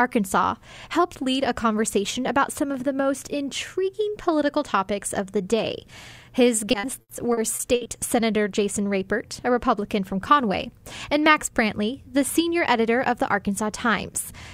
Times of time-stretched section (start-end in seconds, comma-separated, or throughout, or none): none